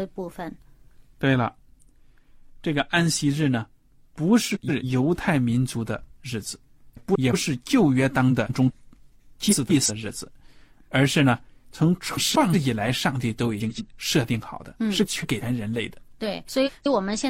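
Frames out of order disrupt the speech eight times: 4.54 to 4.84 s, 6.94 to 7.34 s, 8.30 to 8.71 s, 9.49 to 9.91 s, 12.15 to 12.55 s, 13.60 to 13.81 s, 15.04 to 15.43 s, and 16.48 to 16.87 s. In each, two adjacent blocks were decoded in swapped order. Most blocks last about 186 ms. The first is 139 ms and the sixth 93 ms. Each stretch becomes a garbled flutter. No time goes missing.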